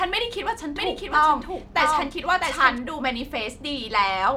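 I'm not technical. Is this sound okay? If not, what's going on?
No. From 0.76 to 2.78 seconds there's a doubled audio track: a second, somewhat quieter copy of the speech runs about seven tenths of a second behind. It's likely an extra recording path or a misaligned edit. Unlike a room echo, it never fades, and it starts and stops abruptly.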